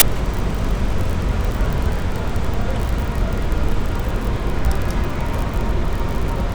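At 0.0 s the file tags were played as audio: the player read the embedded cover picture, a block of compressed image data, as though it were sample values. Compressed bytes look essentially random, so the result is a tick of very loud white noise lasting about 16 milliseconds, a hard-edged burst of static at the very start before the sound itself begins.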